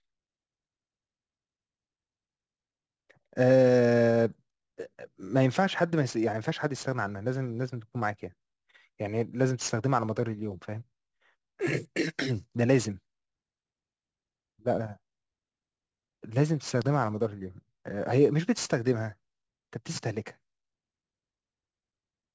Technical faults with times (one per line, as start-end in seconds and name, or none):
0.00-22.35 aliasing